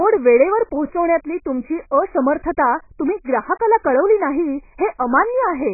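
From start to finish the speech sounds dull and smeared, with nothing at all above 2.5 kHz, so consonants lose their edge and sibilants turn into a fizzy, warbling wash. This is heavy AAC compression damage, likely from AAC-LC running at a very low bitrate, which fits roughly 12 kbps. Starved of bits, the encoder drops its cut-off and quantises the remaining frequency bands so coarsely that detail smears across each frame.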